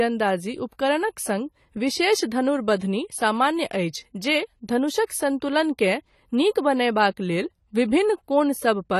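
Throughout, nothing sounds above 14.1 kHz and sibilants fizz and warble, likely AAC compression starving the spectrum at a low bitrate, not a simple low-pass.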